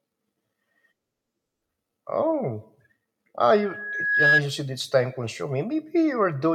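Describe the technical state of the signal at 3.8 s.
At 3.8 s the microphone is hearing its own loudspeaker, and around 1.7 kHz the gain round that loop has passed one, so the tone keeps feeding itself: a loudspeaker feedback squeal running from 3.56 to 4.42 s. It swells from nothing over roughly 0.7 s into a piercing single-pitched whistle that ends up about 10 dB louder than the speech it sits on, so at 3.8 s it is still climbing.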